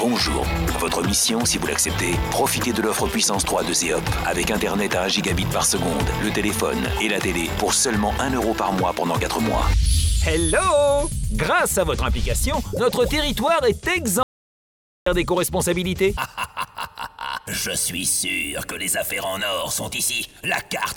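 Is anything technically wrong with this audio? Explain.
Yes, there's an audio dropout to silence from 14.23 to 15.06 s. The sound cuts off mid-flow into dead silence, with no room tone at all, for about 0.83 s. The input was likely lost briefly while the recorder kept writing silence, so that stretch is simply gone.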